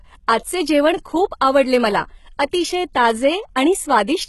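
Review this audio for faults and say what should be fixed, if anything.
Throughout, the treble is gritty and metallic, with nothing above 11.8 kHz. This is likely HE-AAC compression at a low bitrate around 16 kbps, rebuilding highs by band replication. At 2.93 s, pre-echo puts a brief 16 ms hiss ahead of an attack, as the codec's block noise fills the quiet before the transient. To prevent both, encode at a higher bitrate with plain AAC or a lossless format.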